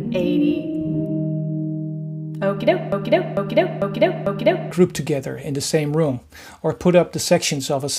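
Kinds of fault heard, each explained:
Broken-record loop: From 2.92 to 4.71 s, a 0.45 s fragment plays four times back to back, identical each pass, and whatever should have come in that stretch is gone. The likely cause is a stalled player, encoder or stream resending its last held piece.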